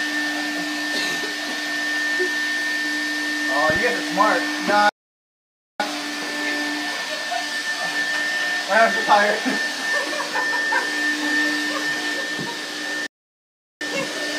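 At 3.70 s a loud pop, two sharp clicks within 80 ms peaking about 10 dB above the sound, lands on top of the audio, likely a voltage step from a plug, switch or static. A playback stall then silences everything from 4.89 to 5.80 s, about 0.9 s, and again from 13.07 to 13.81 s, about 0.74 s, before the sound resumes. The likely cause is the player running out of data or its thread being blocked.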